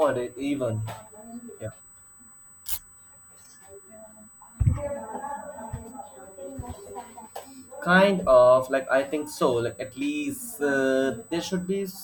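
A thin, steady high-pitched whine sits under this speech recording from start to finish, fixed at 8 kHz and roughly 25 dB below the speech. That is USB whine: the bus pulls current in 125-microsecond microframes, and the resulting 8 kHz ripple leaks through the shared power or ground into the audio path, where it is recorded as a constant tone alongside the speech.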